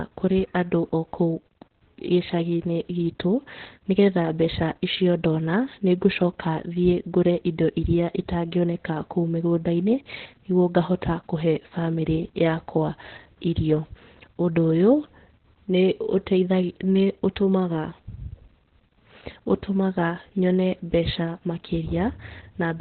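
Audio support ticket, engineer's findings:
Opus voice compression, whole clip. Speech muffled, hoarse, slightly robotic; nothing above 4.3 kHz. Points to narrowband SILK mode at around 8 kbps: band cut to telephone width, excitation coded coarsely. Heavy codec damage.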